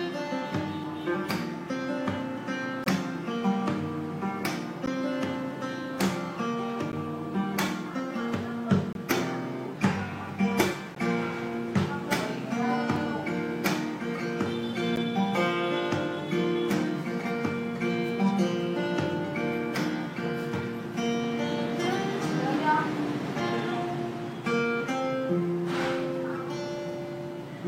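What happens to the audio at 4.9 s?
The timestamps of two consecutive stream segments fail to line up at 4.86 s, leaving a gap between stream segments that the player fills with silence. The spacing of the join points to segments about 2 seconds long. The result is a hole of about 13 ms with hard edges on both sides, heard as a brief click-like dropout in the sound. Nothing is missing, though. The audio simply resumes 13.2 ms later than it should.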